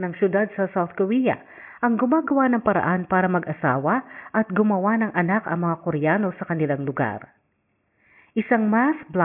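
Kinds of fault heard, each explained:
No technical faults can be heard anywhere in this speech recording, and the signal stays continuous and steady throughout.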